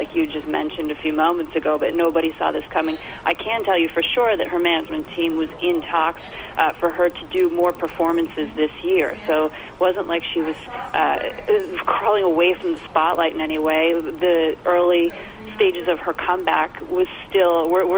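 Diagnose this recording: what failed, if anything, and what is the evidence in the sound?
A resampler restarted on every block at the sample-rate conversion stage causes a steady 20 Hz ticking throughout, present only while signal plays. Converting 24 kHz to 48 kHz in isolated 50 ms blocks leaves edge errors. A spectrogram shows faint vertical lines every 50 ms, and the waveform shows small steps at each boundary.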